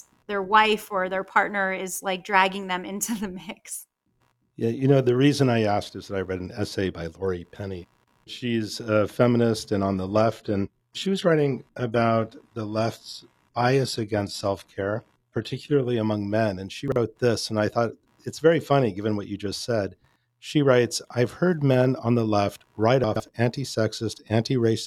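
Throughout the speech there is computer activity noise: a faint buzzing pulse at roughly 70 Hz, sitting around 45 dB below the speech. It is ground noise from the machine's changing electrical load leaking into the audio circuit. Unlike mains hum, it doesn't hold a steady tone. It follows the computer's activity rather than the speech, swelling and fading while the talker's level stays put.

From 9.88 s, just after "a feminist and", until 15.88 s, where "among men" begins, the clip plays as an adaptive stream at a lower bitrate. For those six seconds codec artefacts rise. This points to a switch from a stream of about 96 kbit/s AAC down to a 20 kbit/s HE-AAC rendition after the connection slowed. Packet loss would leave gaps or dropouts. Here the quality simply drops and later recovers at sharp edges, with no break in the sound.

Two brief moments have chunks out of order. Between 16.88 and 16.96 s, just before "this and I thought", an 80 ms stretch plays in the wrong sequence, which fits a 40 ms chunk arriving one chunk late. 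From 23.04 to 23.2 s, right after "on the left write", a 160 ms stretch is jumbled, consistent with a chunk three places late. Both sound garbled, with hard joins. Unlike a dropout or a repeat, nothing is missing and nothing is doubled, only reordered.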